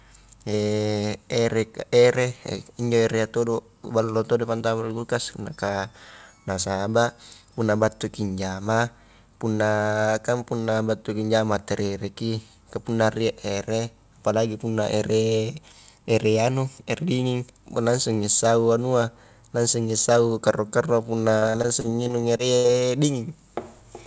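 From 21.38 to 22.70 s the speech breaks up with repeated packet loss, giving a robotic sound. Audio arrived missing or late again and again, and each hole was bridged by stretching the preceding sound, so roughly a fifth of this span is synthetic fill. The longest gap is 71 ms. On a spectrogram the stretch shows smeared, repeated harmonic slices beneath the 8 kHz ceiling set by the call codec. The waveform shows short, looped-looking segments with abrupt joins.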